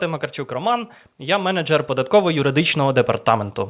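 From 0.48 s to 3.6 s the speech and the background around it grow steadily louder together, by about 11 dB. That slow, shared swell is automatic gain rising: the automatic gain control judged the input too quiet and kept raising its gain over roughly three seconds. The audio also passes through a call path with nothing above 4 kHz, which fits a narrowband telephone codec such as G.711.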